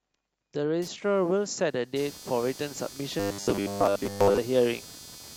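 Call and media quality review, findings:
Shared ground between the computer's digital load and the audio path, modulated by processor, graphics or mouse activity. Computer activity noise from 0.82 s to the end of the clip. Buzzy, scratchy pulsing near 300 Hz, roughly 20 dB below the speech. Tracks machine load, not the talker. Suspect a grounding or power-supply coupling issue in the capture chain.

Audio delivery falling behind, likely starved buffers, with playback looping the last chunk to cover the gaps. Robotic sound from repeated short buffers, 3.20 to 4.38 s. A rigid metallic buzz at 100 Hz is imposed on the speech, which fits a repeat of about 10 ms. Most of the real audio in that stretch is replaced by repeats. Speech contour is only loosely preserved.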